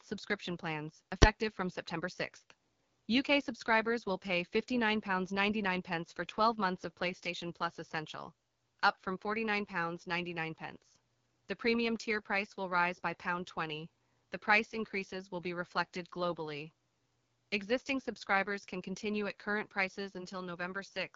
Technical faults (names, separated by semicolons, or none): AMR wideband (HD Voice) codec; invalid numbers at full scale